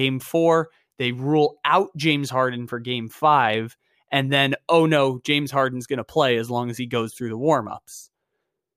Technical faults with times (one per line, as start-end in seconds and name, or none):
none